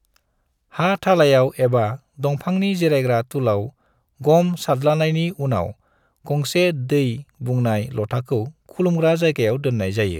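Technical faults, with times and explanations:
No technical faults can be heard in the speech recording, and the signal stays steady and continuous from its opening moment to its last.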